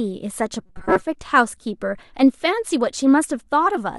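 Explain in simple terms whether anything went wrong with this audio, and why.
Between 0.66 and 1.03 s, new audio likely arrived too slowly, so the player filled most of that stretch by repeating a tiny slice of about 5 ms. This is robotic sound from repeated short buffers: the speech becomes a stiff, metallic buzz near 188 Hz.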